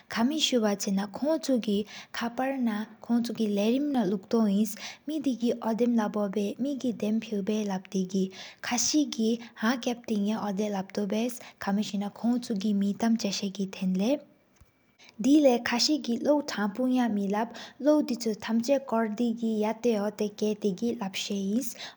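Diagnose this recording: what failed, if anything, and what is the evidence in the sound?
The capture path has most likely been dropping audio between chunks at the driver or buffer stage, losing a short slice each time it closes one block of roughly 4 seconds and opens the next. The speech jumps forward at 3.95, 7.92, 11.9 and 19.85 s, each skip removing a few tens of milliseconds. The two sides are butted together with no gap, so the speech lurches ahead rather than pausing.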